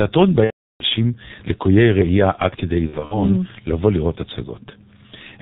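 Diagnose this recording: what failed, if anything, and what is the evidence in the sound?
Codec stage: G.723.1 compression throughout, which fits a 6.3 kbit/s rate. The sound is muffled and hoarse with blurred consonants, and a spectrogram shows nothing above 4 kHz.

Network stage: VoIP packet loss concealed by the speech codec at 0.44–0.84 s, about 360 ms, and at 2.87–3.22 s, scattered gaps up to 60 ms. The decoder stretches the last frame into a fading buzzy tone or coloured noise, which appears as smeared, decaying energy.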